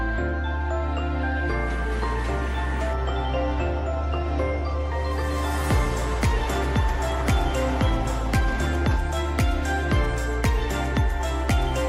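Nothing is technically wrong with the audio in this clip.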